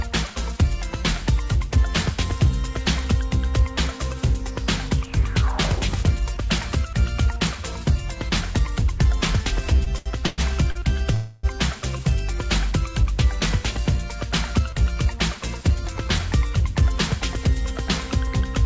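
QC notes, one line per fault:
9.77–10.78 s, repeated stalls (stutter): Packets kept arriving late or slower than playback, so the jitter buffer ran dry five times in about a second. Each time the receiver stretched the last sound to cover the hole, about 264 ms of fill in all, with the longest wait 112 ms, so roughly a quarter of this span is concealment. Nothing is lost, but the audio halts and restarts in a jerky, dragging stutter.
11.14–11.46 s, call audio freeze: The sound stops moving forward and the last fragment hangs on as a buzz or hiss for about 290 ms, never dropping to silence, before the audio resumes exactly where it left off. The likely cause is packets held up in transit, emptying the jitter buffer while the receiver extended what it last had. The result is a gap pushed into the stream and about 290 ms of extra delay, with nothing cut out.
14.59–15.97 s, jitter buffer speed-up: The buffer was holding more audio than its target, so the receiver trimmed it back by cutting out many tiny slices one or a few pitch periods long. 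Around 50 ms went this way across the span, playing the audio about 3% fast at unchanged pitch. That stays below the speed at which it would sound clearly hurried, and the band stops at 8 kHz, consistent with a G.722 call codec.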